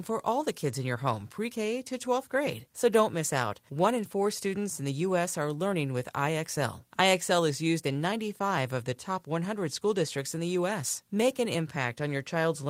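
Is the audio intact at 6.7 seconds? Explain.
Yes, the audio is intact at 6.7 seconds, with no dropout, click, distortion or other fault audible at that point in the speech.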